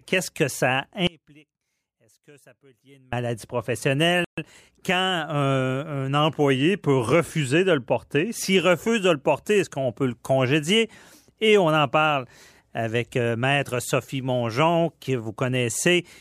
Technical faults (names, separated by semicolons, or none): one channel inverted; playback stall; time-compressed catch-up